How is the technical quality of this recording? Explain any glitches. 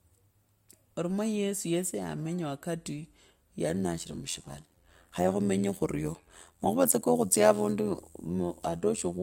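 From 3.69 s to the end of the clip, the speech takes on a rough, buzzing flutter, a robotic tremolo with the level pumping up and down by about 11 dB around a hundred times a second. This is overlap-add ripple. The audio was split into windowed frames and rejoined with an overlap whose windows don't add up to a steady gain. The loudness therefore swells and dips once per frame, and that frame-rate modulation is the flutter you hear.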